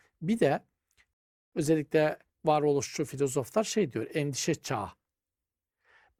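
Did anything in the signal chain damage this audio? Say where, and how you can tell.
Yes. A rebuffering stall at the playback stage: after "bir de" the speech drops to silence from 1.13 to 1.53 s, then resumes exactly where it stopped with "özellikle varoluşçu filozoflar şey". The player's buffer ran dry, inserting about 0.39 s without losing any audio.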